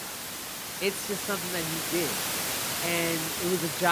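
No technical faults are audible.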